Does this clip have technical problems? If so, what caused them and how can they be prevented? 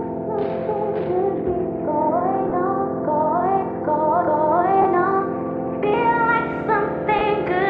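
Yes. Lost LE Audio frames cause brief dropouts at 2.50–2.52 s, 4.82–4.85 s and 7.19–7.21 s, lasting about 20, 30 and 20 ms, which fits two or three missing 10 ms LC3 frames each time. The decoder fills each gap by repeating the last spectrum with scrambled phase signs, so tonal content turns into a short noisy smear. On a spectrogram these gaps look like thin vertical bands where clean harmonic lines blur into noise. The waveform shows a short stretch of irregular, noise-like samples instead of a true gap. Light lossy compression is also present. To prevent the dropouts, keep the Bluetooth link strong and free of 2.4 GHz interference, and use a longer retransmission window or a wired path where timing allows.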